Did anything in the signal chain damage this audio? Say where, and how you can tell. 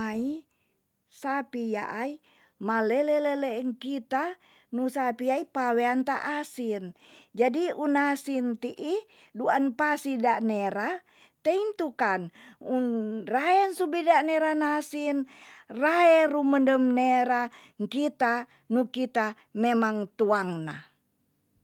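No, nothing along the chain has left an audible mark on this speech recording, and the signal holds steady with no damage from any stage.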